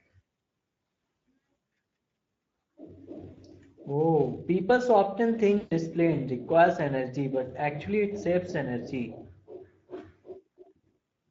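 Speech coded throughout with the Speex codec, and the damage is plainly audible: the low-bit excitation leaves the speech noisy and hoarse, which fits a Speex bitrate of about 16.8 kbps. VoIP packet loss concealed by the speech codec occurs twice. From 3.33 to 3.39 s, about 40 ms of audio is lost, consistent with two 20 ms frames. From 5.57 to 5.73 s, just after "people so often" and before "this plane requires energy", about 140 ms is lost, fitting seven frames. In both cases the decoder stretches its last pitch and filter into a buzzy tone or a coloured noise that fades, and the speech sounds weak and smeared for a short while after the packets return.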